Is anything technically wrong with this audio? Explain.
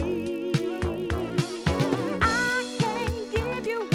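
Yes, there is one fault. Throughout the clip, a resampler restarted on every block converts 24 kHz to 48 kHz per 20 ms block, leaving edge errors: a 50 Hz buzz, visible as evenly spaced vertical spectrogram lines.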